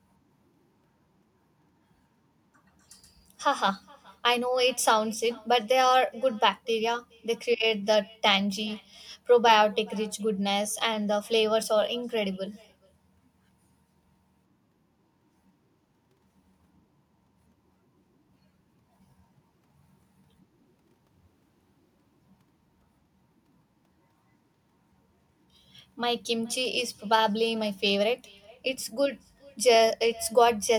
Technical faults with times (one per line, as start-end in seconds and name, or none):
0.00-30.79 echo with no canceller